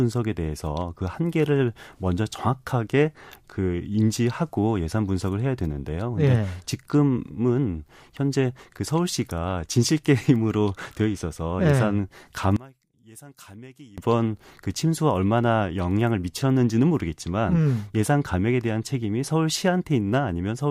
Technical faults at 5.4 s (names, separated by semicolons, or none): none